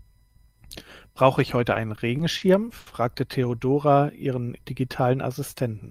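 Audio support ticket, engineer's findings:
Speech drags and stutters, 1.73–2.43 s: repeated stalls (stutter), four short holds, longest 40 ms, about 100 ms filled, nothing lost. Jitter buffer repeatedly running dry as packets arrive late; receiver extends last sound each time.

Single held sound with slight buzz or dip, 2.79–2.88 s: short stall from a late packet, 70 ms stretched, no audio missing. Packet delay jumped by 70 ms, jitter buffer underran; receiver sustained last sound, then resumed in place.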